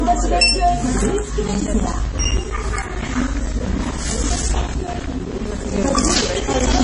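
Right from the start the whole clip has that watery, swirly quality, and there's nothing at all above about 10.4 kHz. That's very likely MP3 compression, and heavy at that, which fits a bitrate down around 32 kbps. With so few bits, the encoder has chopped off the top end at a fixed point and is dropping the weaker frequency detail from frame to frame, so textures shimmer and sharp onsets come out smeared.

From 1.48 s through to 6.80 s there's a steady ticking wherever there's sound, one every 64 ms, so roughly fifteen a second and around a hundred in all. These are periodic USB or driver dropouts. Something is stalling the audio path on a fixed schedule, and each stall leaves a gap of around 10 ms filled with silence. Those regular little holes in the sound are what you hear as the even, mechanical ticks.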